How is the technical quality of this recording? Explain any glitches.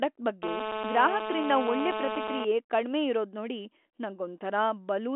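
The main problem is a stretch of GSM phone buzz from 0.43 to 2.45 s, ending just before "ಕಡ್ಮೆ ಇರೋದ್ನೋಡಿ". A 2G handset was on a call nearby, transmitting in bursts about 217 times a second. The audio circuitry rectified those radio pulses into a hard, raspy buzz at 217 Hz, full of harmonics. Because the phone was mid-call, the buzz holds steady for those two seconds, sitting only about 4 dB below the speech. The phone-line band, carried by G.726 at 40 kbit/s, runs roughly 250 Hz to 3.4 kHz.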